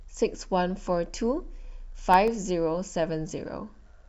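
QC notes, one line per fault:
2.00–2.42 s, CD scratch ticks: four short ticks cut through the speech, evenly spaced, about seven a second. Each is under a millisecond. A scratch destroys more data than error correction can rebuild on each disc turn, so the player patches or mutes those samples.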